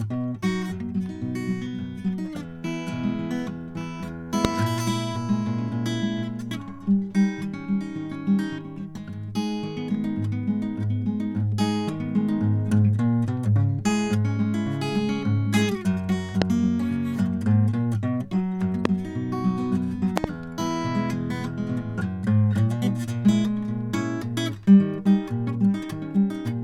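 Loud pops at 4.45 to 4.47 s, 16.42 to 16.44 s, 18.85 to 18.87 s, and a double pop at 20.17 to 20.26 s. Each sharp thump stands well above the music, which carries on underneath, and likely comes from a sudden voltage pulse entering the signal path.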